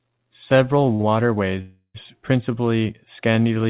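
A speech recording carried over a call path, band-limited to nothing above 4 kHz, which fits 64 kbps G.711 A-law. At 0.95 s and again at 1.01 s the sound is briefly held, stretched by about 47 ms and then 19 ms before carrying on. These are short stalls from a late packet: the jitter buffer ran empty and the receiver extended the last sound until the data arrived. Nothing is lost, but the timing slips. From 1.61 to 1.96 s there is a longer hold of about 330 ms that fades and ends in roughly 70 ms of silence before the speech resumes where it stopped. This is a call audio freeze, likely from packets held up in transit that drained the buffer. It inserts a gap without removing any audio.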